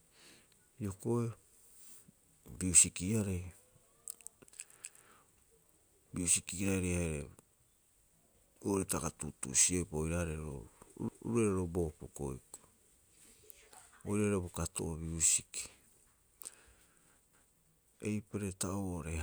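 A speech recording with a brief stutter at three evenly spaced points, where a quarter-second of sound plays twice: 4.84 to 5.09 s, 11.09 to 11.34 s and 17.34 to 17.59 s. This is overlapping chunks. The audio was handled in 6-second blocks, and each new block began 250 ms before the previous one ended. That duplicated slice at every join produces the regular, recurring hiccup.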